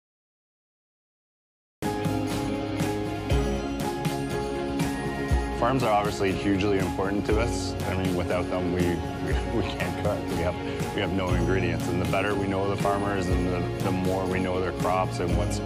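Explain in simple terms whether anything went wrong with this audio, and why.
Dead silence fills the first 1.82 seconds, then the sound bursts in mid-way with no fade-in: a cut-off start, because recording began late.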